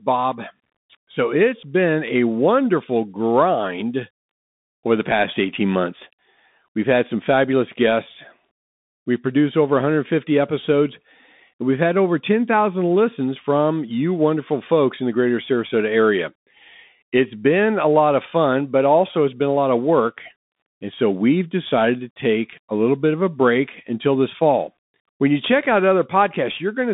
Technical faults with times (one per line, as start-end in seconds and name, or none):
0.00-26.93 Bluetooth CVSD headset codec